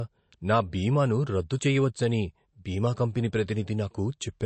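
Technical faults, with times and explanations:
Throughout, MP3 compression: the speech has a hard ceiling, with nothing above about 8.3 kHz, and the coding damage is plainly audible across the whole clip. That's likely an MP3 encoder starved of bits, around 36 kbps judging by how it sounds. At that rate it chops the treble off at a fixed point and throws away the weaker frequency detail it thinks you won't miss, which strips the air from the top end and leaves that smeared, processed texture.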